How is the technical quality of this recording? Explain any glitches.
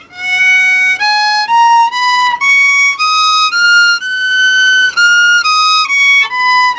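The recording has two timing glitches, both from a call connection whose band stops at 8 kHz, which fits G.722 at about 64 kbps.

From 2.22 to 3.58 s there are repeated stalls (stutter). Packets arrived late, the jitter buffer kept running dry, and the receiver stretched the last sound across 19 short gaps, each at most 14 ms, totalling 186 ms. Nothing is lost, but the audio catches and drags. A spectrogram shows brief smeared, repeated columns.

From 3.78 to 5.00 s there is a jitter buffer slow-down. To rebuild its reserve, the buffer repeated single pitch periods, adding 134 ms and playing at 90% speed without a change in pitch. The sound is drawn out. The waveform shows near-identical cycles copied back to back.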